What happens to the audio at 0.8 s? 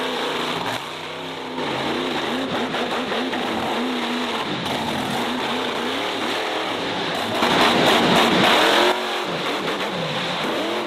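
At 0.77 s the whole signal, sound and background noise alike, drops abruptly by about 6 dB and stays at that lower level until 1.58 s. This sudden gain jump is likely a digital gain change applied from one sample to the next with no ramp.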